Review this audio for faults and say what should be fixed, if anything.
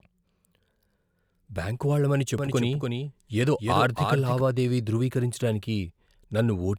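From 2.38 s to 4.40 s, right after "బ్యాంకు వాళ్ళమని", there's a doubled audio track. A second full-band copy of the speech trails the original by about 300 ms, a few dB quieter. It has no reverb tail or room colour, and it cuts in and out abruptly at both ends. That points to the same signal being mixed in twice, likely from a slower second capture path or two misaligned copies left in an edit. To prevent it, make sure only one input route feeds the mix and check edits for stacked, offset clips before export.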